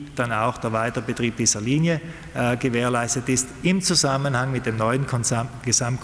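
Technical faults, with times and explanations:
No technical faults can be heard in this clip.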